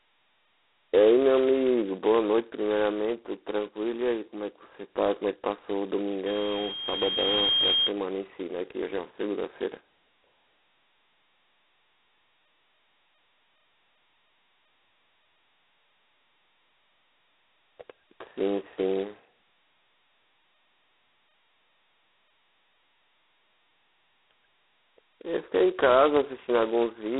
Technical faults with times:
0.00-27.20 G.726 ADPCM
6.26-7.92 loudspeaker feedback squeal

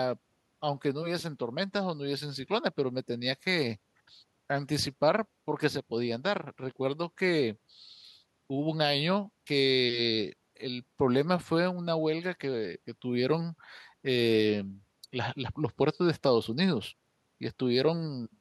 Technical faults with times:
none

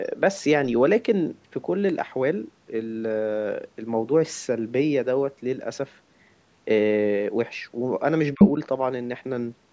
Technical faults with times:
8.34-8.40 speech suppressed in double talk
8.39-8.49 other side's voice leaking through

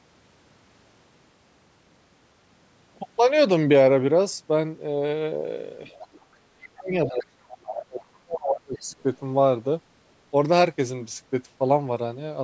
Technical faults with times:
5.86-6.25 other side's voice leaking through
6.45-8.89 speech suppressed in double talk
7.65-7.74 other side's voice leaking through
8.01-8.05 other side's voice leaking through
8.76-8.95 other side's voice leaking through

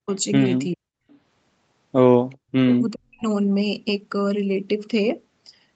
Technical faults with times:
0.02-0.09 speech suppressed in double talk
0.75-0.85 speech suppressed in double talk
1.10-1.14 echo leak
2.33-2.37 echo leak
2.49-3.25 speech suppressed in double talk

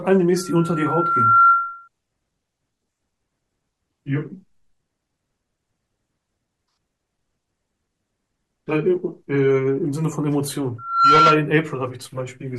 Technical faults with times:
0.36-1.88 loudspeaker feedback squeal
10.78-11.47 loudspeaker feedback squeal

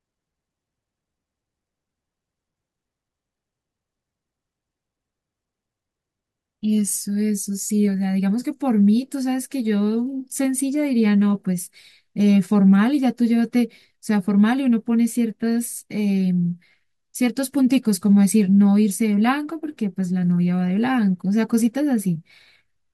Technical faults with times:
none

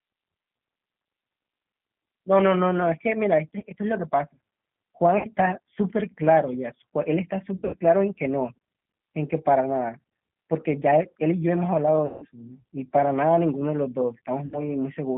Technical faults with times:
0.00-15.17 G.729 codec
3.60-3.64 VoIP packet loss concealed by the speech codec
5.18-5.27 VoIP packet loss concealed by the speech codec
7.57-7.76 VoIP packet loss concealed by the speech codec
12.06-12.26 VoIP packet loss concealed by the speech codec
14.46-14.69 VoIP packet loss concealed by the speech codec

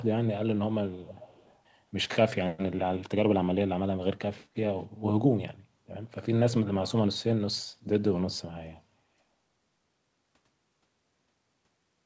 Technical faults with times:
0.91-1.58 echo leak
4.79-4.84 echo leak

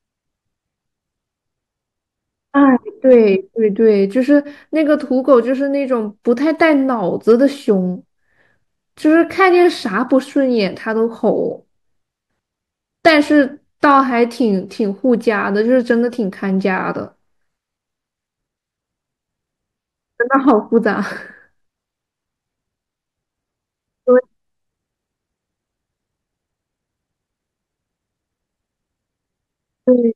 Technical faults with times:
3.11-3.15 hard clipping
7.29-7.33 hard clipping
13.06-13.13 hard clipping
20.35-20.77 hard clipping

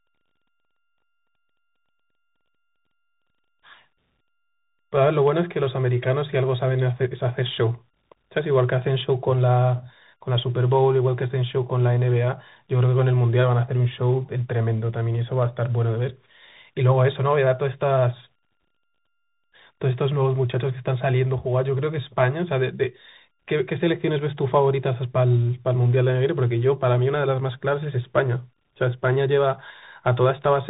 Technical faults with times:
0.00-30.70 tandem speech coding

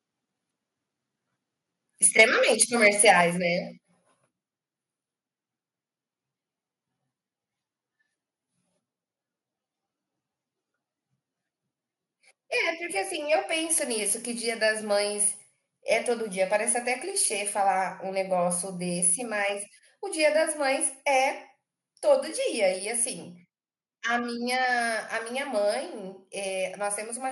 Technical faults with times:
2.03-2.23 microphone overload
2.21 microphone volume stepped down
2.62-3.11 microphone overload
3.21 microphone volume stepped down
22.56 microphone volume stepped down

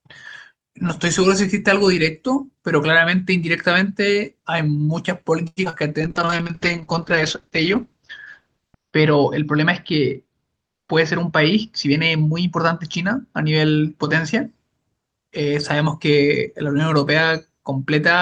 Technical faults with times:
5.47-5.59 short stall from a late packet
5.65-5.75 short concealed packet loss
5.87-6.45 jitter buffer slow-down
6.04-14.92 call bitrate drop
10.54-11.65 jitter buffer speed-up

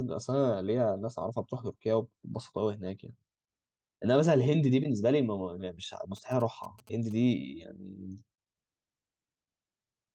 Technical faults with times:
6.17-7.13 GSM signalling bursts

